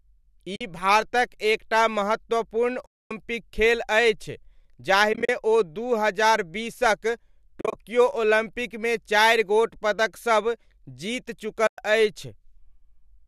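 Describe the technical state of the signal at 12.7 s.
At 12.7 s the speech signal is intact, with no fault at that moment beyond the light, steady coloration of what is likely low-delay AAC compression running as normal.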